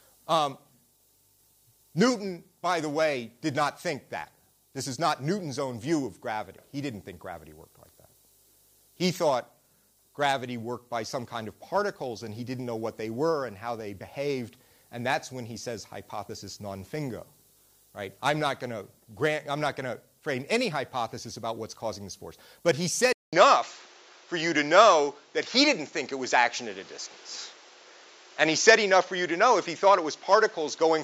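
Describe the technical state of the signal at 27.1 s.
At 27.1 s the signal falls within a stretch running from 23.13 s to the end, at 31.03 s. The input was likely switched to a poorer device. A 200 ms silence marks the switch. After it, nothing reaches above 7.6 kHz, so the sound turns dull and boxy. The level shifts by around 5 dB, and a new noise floor sits roughly 30 dB below the signal.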